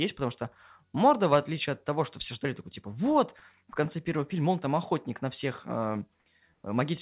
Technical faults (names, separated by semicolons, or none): comfort noise in place of the background